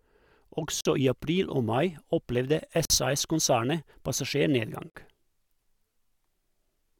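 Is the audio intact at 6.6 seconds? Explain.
Yes, the speech at 6.6 seconds plays through intact, with no audible fault at that moment.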